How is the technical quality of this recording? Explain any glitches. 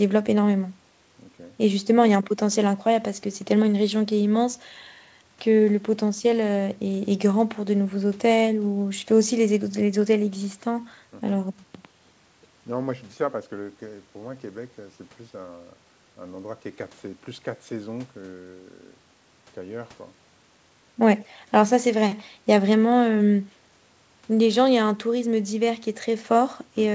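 The technical quality holds up, with no glitches to explain; the recording carries the bandwidth of a wideband call, with nothing above 8 kHz.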